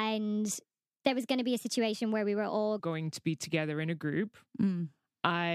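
Speech clip with a section at the wrong speed from 0 to 2.8 s, running 1.27 times fast and about four semitones high, likely from a clock mismatch. Pitch and tempo rise together, unlike a pitch-shift.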